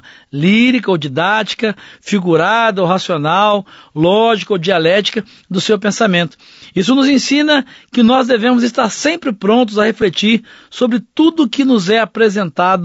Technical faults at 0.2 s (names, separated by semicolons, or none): low-delay AAC compression